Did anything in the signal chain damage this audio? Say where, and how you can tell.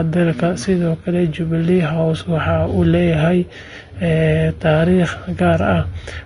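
Yes. The damage sits at the codec stage and runs through the whole speech clip. Nothing is present above 10.6 kHz, and the treble that remains sounds hissy and grainy, with roughened tones and smeared consonant onsets. That points to Vorbis compression, likely at a low bitrate around 32 kbps. At that setting the encoder lowers its cut-off and quantises the high-frequency residue so coarsely that fine detail is replaced by noise of similar energy.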